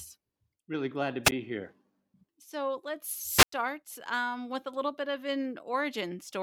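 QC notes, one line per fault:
1.24–1.32 s, wireless microphone squelch dropout: the radio link fades, hiss swells briefly, then the receiver's squelch mutes the output for about 12 ms before the speech returns. The waveform shows a thin flat gap, and the spectrogram shows a broadband noise smear just before it.
3.35–3.53 s, wireless microphone squelch dropout: the same fade, with a longer mute of about 96 ms. The waveform shows a clear flat gap, and the spectrogram shows a blank vertical band after the hiss rises.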